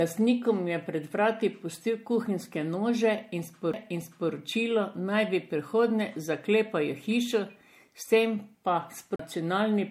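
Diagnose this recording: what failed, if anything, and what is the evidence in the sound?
The codec stage is the problem throughout: the speech sounds swirly, smeared and hollow, with blurred consonant attacks and nothing above 16.5 kHz. That's worse than plain 64 kbit/s MP3 would give, so it's likely generation loss from a few re-encodes on shifting frame grids.

There are two CD skips at the playback or storage end. Right after "vrati pustil kuhinjske nože", at 3.73 s, a few-millisecond mute comes before a jump. After "tem pa", from 9.16 to 9.19 s, a mute of around 40 ms precedes another jump. The laser is hopping tracks on the spiral.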